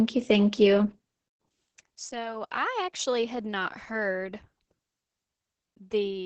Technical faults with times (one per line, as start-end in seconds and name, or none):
0.00-6.25 Opus voice compression